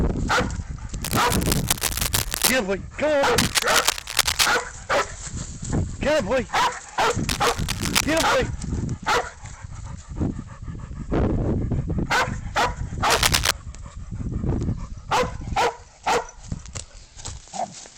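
Four bursts of cable scratch noise sit over the sound, from 1.03 to 2.52 s, 3.38 to 4.48 s, 7.29 to 8.24 s and 13.10 to 13.51 s. Each is a dense, irregular scratching or rustling roughly as loud as the wanted signal, with the shortest, last burst noticeably louder than it. The likely cause is a worn cable, connector or control being moved, its contact resistance jumping rapidly and injecting uneven noise into the signal path.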